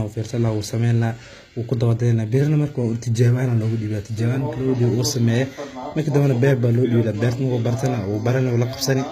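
From start to finish the speech has a gritty, metallic edge on its s sounds, with a lisping quality, and nothing is heard above about 14.9 kHz. This is plainly audible HE-AAC compression, likely at a bitrate around 20 kbps. The codec keeps only the lower spectrum and rebuilds the treble by copying lower bands upward, so the harmonics of the top end don't match what lies below.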